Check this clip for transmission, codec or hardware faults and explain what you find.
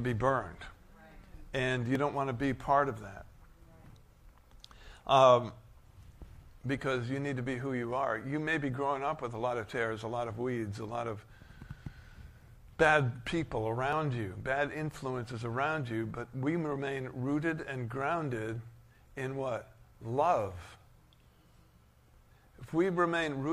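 There is one transmission fault, recurring three times: overlap between stream segments, at 1.95 to 1.99 s, 13.93 to 13.96 s, and 19.95 s. The 6-second segment boundaries carried overlapping time stamps, so the player discarded audio that was not actually duplicated, removing roughly 35 ms twice and under 20 ms once. Each event is heard as a click or tiny skip. On the waveform, the trace jumps abruptly; on the spectrogram, a thin vertical broadband line appears.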